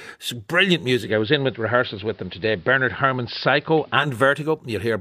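At 0.99 s the receiver lost its digital signal, an instance of digital radio blending to analogue: it cross-faded over about 134 ms to the station's AM broadcast and stayed there until 4.08 s, when it blended back. During that stretch the speech turns dull and narrow, a faint hiss sits some 35 dB beneath it, and the level shifts by about 2 dB at each blend.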